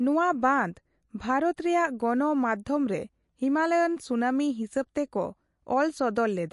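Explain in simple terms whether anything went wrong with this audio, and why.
Throughout the recording, the speech sounds watery and swirly, with s sounds turning chirpy and nothing heard above about 11.3 kHz. That points to MP3 compression, likely at a low setting, where the encoder cut the treble and dropped faint detail to save space.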